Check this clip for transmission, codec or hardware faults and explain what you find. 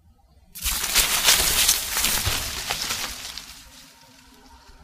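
Nothing stands out here: the sounds in the clip come through without any dropouts, glitches or other transmission, codec or hardware trouble to point to.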